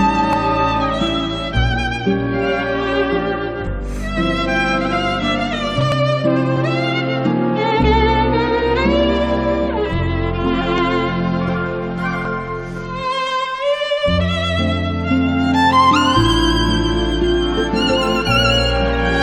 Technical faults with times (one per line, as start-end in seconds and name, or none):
0.33 dropped buffer (overrun)
5.92 dropped buffer (overrun)
6.56 damaged data in a compressed stream
10.60 damaged data in a compressed stream
10.78 dropped buffer (overrun)
12.25 dropped buffer (overrun)